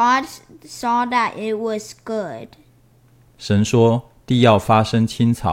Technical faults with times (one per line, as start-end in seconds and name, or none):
none